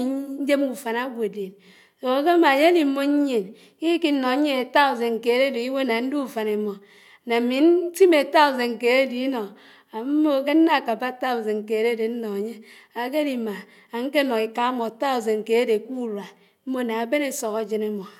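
Speech recording; no technical faults found.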